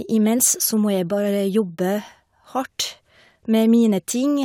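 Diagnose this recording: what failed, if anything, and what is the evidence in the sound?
Listening to the speech here, nothing stood out as a failure at any stage of the chain.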